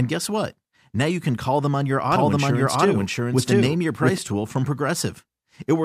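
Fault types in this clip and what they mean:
Doubled audio track: From 2.12 s to 4.18 s, just after "call them on your" and ending before "tool from", a second full-band copy of the speech runs about 0.7 s behind at roughly equal loudness, likely from a second, slower capture path. It starts and stops abruptly, with no decay or room colour. On a spectrogram the speech patterns repeat, shifted sideways; on the waveform overlapping envelopes thicken that stretch, with hard edges at both ends.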